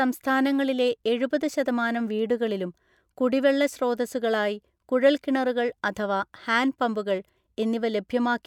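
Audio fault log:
Nothing stood out on listening to the speech in this recording.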